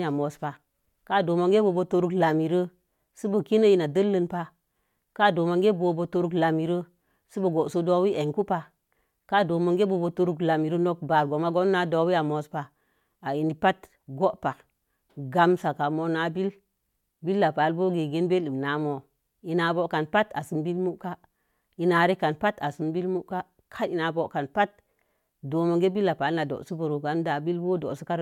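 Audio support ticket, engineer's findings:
Findings: no audio fault found in the speech clip.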